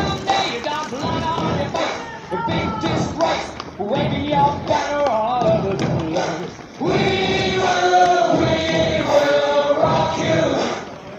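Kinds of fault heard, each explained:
No technical faults can be heard anywhere in the recording, and the signal holds steady throughout with nothing that breaks, distorts or drops out.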